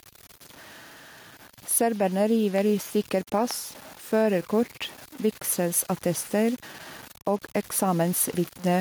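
Throughout the speech, quiet passages turn gritty and grainy, with distortion that tracks the sound, noise roughly 25 dB below it. This is likely low bit depth without dither, truncation to about 7 bits.

The level also breathes: background swells in pauses and ducks by around 5 dB under louder syllables. The likely cause is gain pumping, with a fast limiter reacting to excessive gain.

From 2.58 to 2.60 s, just before "i stykker", a single sharp loud pop, about 10 dB above the speech, jumps out, likely from a voltage spike.

A second loud pop of similar strength follows from 3.51 to 3.53 s, just after "i stykker", with the speech continuing underneath.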